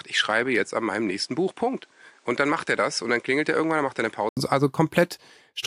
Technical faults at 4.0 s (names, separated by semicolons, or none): input switched to a poorer device